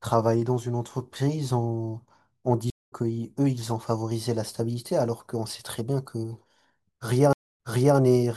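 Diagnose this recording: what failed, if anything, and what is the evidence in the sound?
Network-side stream reconnects: the connection dropped twice and the player restarted its decoder. At 2.70 s, 189 ms of silence skips about 0.2 s ahead; at 7.33 s, 235 ms of silence replays 408 ms.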